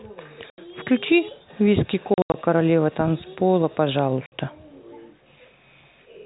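Packet loss filled with silence chops the speech at 0.5–0.58 s, in scattered gaps across 2.14–2.34 s (longest 80 ms), and at 4.26–4.32 s. The holes have hard edges, consistent with 20 ms packets.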